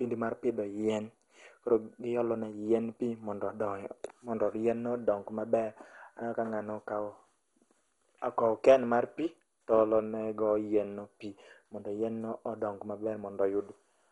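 From start to finish the speech sounds dull and gurgling, with a granular, watery roughness. This is most likely MP2 compression starved of bits, consistent with a rate near 56 kbps: the codec switches off upper sub-bands and coarsely quantises the rest. A spectrogram shows nothing above 11.2 kHz, and blocky patches in the upper bands blink on and off over time, while the waveform looks normal.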